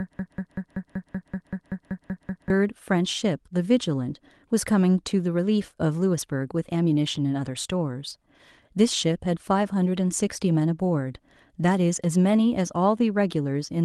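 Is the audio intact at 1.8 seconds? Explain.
No, 1.8 s falls inside a broken-record loop running from the very start to 2.50 s: a 0.19 s fragment repeats twelve times, likely from a stalled stream.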